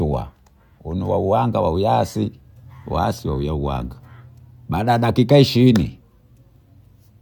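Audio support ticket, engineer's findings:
No audible faults found.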